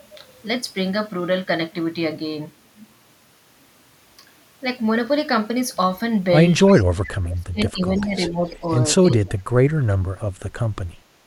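Speech recording with two related call-path faults in the second half. An echo leak appears at 6.67–6.84, 7.98–8.08 and 8.54–8.76 s: a faint copy of the speech delayed by 343 ms, roughly 20 to 35 dB below the talker, likely left behind by an incomplete echo canceller. Speech suppressed in double talk follows at 7.03–8.13, 8.29–8.66 and 9.15–9.63 s, with the talker dipping or dropping out by up to about 40 dB, likely while both ends overlap.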